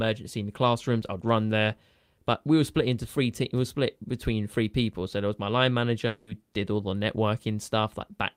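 A speech clip in which a long network dropout likely stopped packets arriving for about 0.2 s, from 6.07 to 6.29 s. The receiver fills the whole gap by stretching the last sound into a fading buzz, and the speech resumes with that stretch missing.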